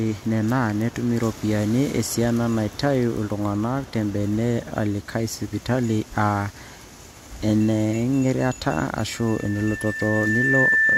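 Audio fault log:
9.16–10.98 s, loudspeaker feedback squeal: a 1.8 kHz tone swells over about a second and a half until it sits a few dB above the speech, as the microphone re-amplifies its own loudspeaker.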